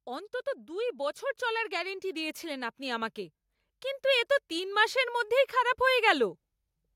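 From 0.66 to 3.19 s, automatic gain rising lifts the level by about 5 dB, and again from 4.48 to 6.37 s, after "কিন্তু এ তো", by about 3 dB. The background noise swells with the speech, which marks this as gain control rather than a talker moving closer.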